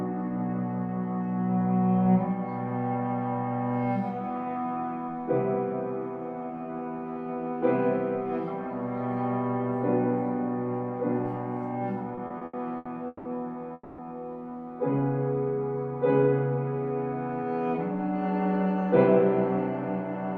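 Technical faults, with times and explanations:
12.15–13.27 s, repeated stalls (stutter): the sound drags and stutters through six short gaps, the longest 180 ms, adding 420 ms of filled sound (about 37% of the stretch) with nothing lost. Packets arrived late, so the jitter buffer kept emptying and the receiver stretched the last sound.
13.73–14.00 s, call audio freeze: the last sound is held for 250 ms as a fading buzz or hiss, with about 10 ms of silence, then the audio resumes exactly where it stopped, now running 250 ms later. Delayed packets likely emptied the jitter buffer.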